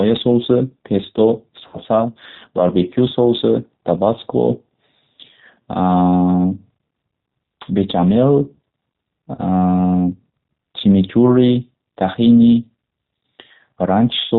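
Throughout, the speech passes through the G.729 codec at 8 kbit/s, rebuilt from a filter, pitch predictor and sparse pulses, so it sounds band-limited below 4 kHz, rough and synthetic. At 1.67 to 1.79 s, VoIP packet loss concealed by the speech codec fills about 60 ms by extrapolating the last frame, giving a fading stretched sound that stays weak briefly afterwards. At 9.35 to 9.40 s, a 30 ms gap is covered the same way, with a shorter fading dip.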